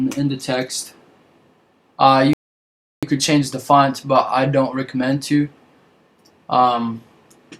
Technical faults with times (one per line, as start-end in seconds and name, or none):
2.33-3.03 rebuffering stall